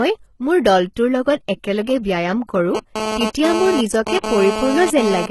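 Speech, with treble that is heavily processed throughout. Nothing reaches above 11.8 kHz, and the top octave sounds synthetic: s sounds come out gritty and metallic rather than dull. That points to HE-AAC compression as the likely cause, with spectral band replication rebuilding the highs from copied lower bands, and the heavy damage fits a low bitrate around 16 kbps. Plain low-pass filtering would leave the top simply missing. Here something is present up there, but its harmonics do not line up with the bands below.

From 2.75 s to 5.26 s a GSM phone buzz sits about 5 dB below the signal. It is a hard, raspy tone at 217 Hz with many harmonics, from a nearby handset's radio bursts being rectified in the audio circuit. It comes and goes in the way a data transfer produces, rather than holding steady as during a call. Its 217 Hz rate and raspy harmonic texture set it apart from 50 or 60 Hz mains hum.

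Between 4.18 s and 4.24 s, a 54 ms smear of hiss runs ahead of a sharp attack, which lands softened. This is pre-echo. The codec spread its quantisation noise across a whole block, so noise sized for the loud onset leaked into the quiet moment before it. Unlike a true echo or reverb, the smear comes before the sound rather than after it.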